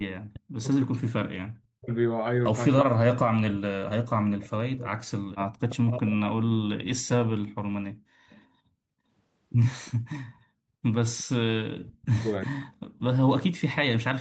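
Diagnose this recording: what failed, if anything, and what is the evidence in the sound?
Speech suppressed in double talk, from 0.27 to 1.92 s, 2.84 to 6.72 s and 11.65 to 12.7 s, at the call-processing stage. In each span the speech sinks by as much as about 40 dB or breaks up in pieces, for roughly 1 s, 4 s and 0.7 s in total. This is likely an echo canceller that could not tell the near talker from loudspeaker echo while the far side was talking, so it attenuated everything.

Echo leak, at 8.29 to 8.47 s, also at the call-processing stage. A faint, delayed copy of the speech surfaces briefly, about 30 dB below the speech and trailing it by 353 ms. The likely cause is the far end's echo canceller on a loudspeaker device, which left residual echo in its microphone signal and sent it back into the call, where it is heard as a short scrap of echo.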